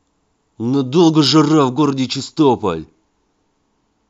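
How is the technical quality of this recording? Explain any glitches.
No glitches turn up anywhere in this short speech recording, so there's really nothing here to explain.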